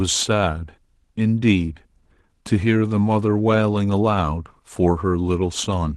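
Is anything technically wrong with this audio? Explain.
No, nothing is technically wrong.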